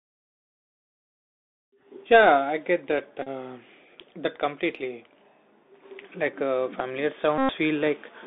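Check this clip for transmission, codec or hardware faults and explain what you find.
Two faults are present: the whole clip has gone through a Bluetooth CVSD headset codec, and there are two short Bluetooth headset packet repeats.

Bluetooth CVSD headset codec, throughout: the sound is confined to a narrow telephone band of about 250 Hz to 3.7 kHz, which fits a 64 kbps CVSD headset link. CVSD sends a single up-or-down bit per sample with an adaptive step, so the waveform is only approximated. The damage is plainly audible as a grainy hiss under the speech, scratchy sibilants, and distortion where loud high-frequency sound changes faster than the step can follow.

Bluetooth headset packet repeated, at 3.23 to 3.28 s (just after "I get that") and 7.38 to 7.52 s (just after "uh familiar"): headset voice packets went missing, and the decoder filled each gap by decoding the previous packet's bits again. 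The first gap covers about 37.5 ms of audio, which points to roughly ten lost packets. The second covers about 108.8 ms, nearer thirty packets. A continuous run of repeats cycles every 3.75 ms, so each gap is heard as a short, steady buzz near 267 Hz that stops when good packets return.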